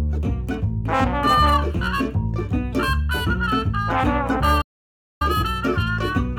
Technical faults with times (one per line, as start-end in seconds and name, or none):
4.61-5.22 playback stall